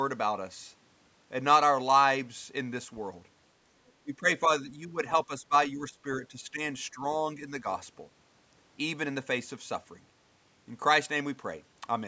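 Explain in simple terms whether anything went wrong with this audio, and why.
Two problems can be heard in this speech, both around the middle.

At 3.87 to 3.91 s there is a very brief, faint scrap of a second voice: other side's voice leaking through. The most likely cause is that the talker's device was playing the far end on a loudspeaker, and the echo canceller failed to remove a small leftover from the microphone signal. It is extremely quiet and over in a fraction of a second.

Right after that, the talker's own voice keeps dipping and partly dropping out: speech suppressed in double talk. This happens at 4.04 to 4.27 s, 4.46 to 4.98 s, 5.25 to 5.54 s, 5.72 to 6.6 s, 6.93 to 7.03 s and 7.38 to 7.66 s. The likely reason is that both people spoke at once, and the echo canceller, unable to tell the talker apart from the loudspeaker echo, turned everything down. The dips are clearly noticeable in the earlier stretches and only slight by the last one.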